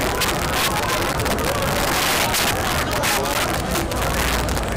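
Integer overflow runs through the whole clip. The signal is driven about 15 dB past full scale, and rather than being limited, each peak that exceeds the largest integer wraps around to the opposite sign and jumps across the full range. Only a small share of the samples, roughly one in twenty, go over, so the damage gathers on the loudest moments. There it is heard as violent, harsh cracks, far sharper and more abrupt than ordinary clipping.

A block of digital silence occurs at 1.13 s and again at 3.34 s. Each time, about 10.7 ms of audio is replaced by silence, which fits a 512-sample buffer that was not filled in time. The sound drops straight to silence and comes straight back with no fade. Because the holes are so short, each one is heard as a brief tick or dip.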